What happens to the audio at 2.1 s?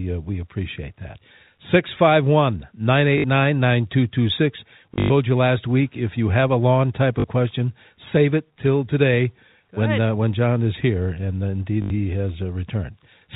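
Nothing goes wrong at 2.1 s: the speech passes through intact, carried by the same band-limited telephone coding as the rest of the line.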